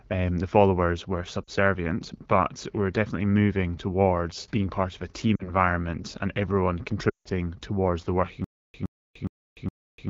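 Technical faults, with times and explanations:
1.44–1.50 s, 5.36–5.50 s and 7.09–7.29 s, lost AMR speech frames: after "um the followers were" and "being part of a", about 40 ms of audio goes missing, which fits two 20 ms frames, and the sound briefly dips and warbles. Between "and everyone" and "towards the working", about 160 ms is lost. The decoder of this 12.65 kbit/s wideband stream reuses its last good pitch and vocal tract settings at falling gain, so the sound drops to near silence within two frames before recovering roughly.
8.44 s to the end, stutter with silent gaps: a 117 ms burst of sound repeats four times, once every 414 ms, with about 297 ms of digital silence after each repeat. This steady replay-then-empty cycle is likely caused by a stalled player or stream that replays its last fragment at each retry and then runs dry. The audio that belonged in this stretch never plays.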